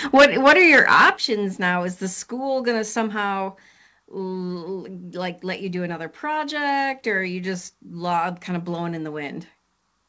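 A short speech recording opens with harsh, crackling distortion on its loudest syllables from 0.15 to 1.09 s. The peak tops are flattened, with roughly a tenth of the samples squared off. This is likely microphone overload: the input was set about 12 dB too hot, so the converter hit its ceiling. The whole sound, background included, also drops abruptly in level twice, by about 4 dB at 0.17 s and by about 9 dB at 1.17 s. That points to the microphone volume being stepped down by the call software as it reacted to the clipping. All of it passes through a call path whose band stops at 8 kHz, which fits the G.722 codec.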